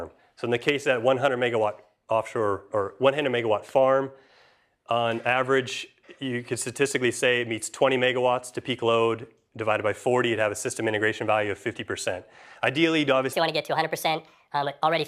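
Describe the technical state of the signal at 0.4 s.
Nothing at 0.4 s points to a technical fault; the signal is intact at that moment.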